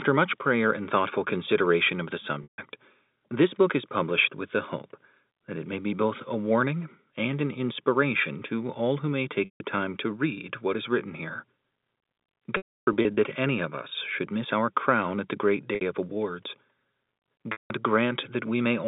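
Packet loss with pitch repetition occurs five times: at 2.43 to 2.58 s after "thoughtful consideration of the", at 9.45 to 9.60 s, from 12.57 to 13.17 s before "that any of", at 15.75 to 15.81 s between "crown at the great" and "of awards", and at 17.52 to 17.70 s. Each time, lost packets are concealed by looping the last pitch period, so the sound briefly holds a buzzy, frozen tone that fades out. In the 12.57 s stretch, about 390 ms is lost in scattered gaps, with the longest run lasting 300 ms, so it fades toward silence. On a spectrogram, each gap shows flat, unchanging harmonic lines tapering off. On the waveform, it appears as identical repeating cycles shrinking in amplitude. The narrow 200 Hz to 3.7 kHz telephone band of the G.711 line stays in place throughout.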